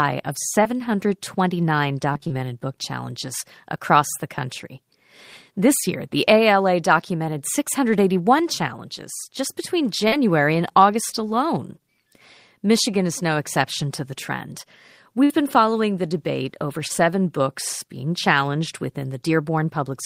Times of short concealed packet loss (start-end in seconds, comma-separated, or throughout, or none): 0.63-0.67, 10.08-10.14, 11.10-11.14, 16.88-16.92